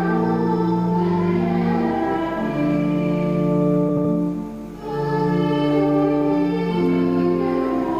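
From 3.89 to 4.05 s the sound turns into a brief garbled flutter. These are frames out of order: two adjacent blocks of about 78 ms were decoded swapped, so that stretch plays back-half first, with no time lost.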